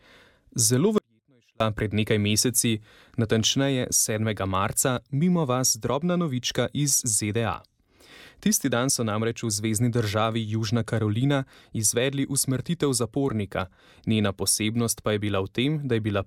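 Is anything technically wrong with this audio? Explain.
Yes. From 0.98 to 1.60 s the sound abruptly drops to a faint leak roughly 40 dB down for about 0.62 s, likely an audio dropout to a faint residue.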